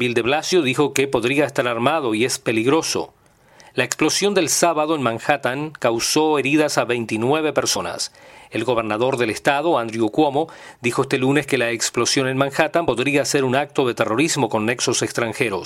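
Compressed frames skipped at 0.51 s (roughly one frame, about 30 ms lost) and at 7.75 s and 12.87 s (about two frames, about 50 ms each). The jumps fit a frame of about 26 ms.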